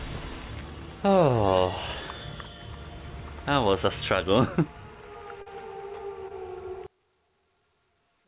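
At 5.42 to 5.48 s and again at 6.28 to 6.32 s you get short concealed packet loss: about 40 ms, then 20 ms, never arrived in time, and the receiver papered over the gaps by extending the preceding sound, so each spot comes across as a quick smear or wobble. From 6.87 s to the end, things drop by about 34 dB and turn faint, which is most likely one channel inverted: with one side's polarity flipped, everything shared between the channels cancels in a mono sum, leaving only a faint residue. The call path itself stops at 4 kHz, consistent with a G.711 A-law codec.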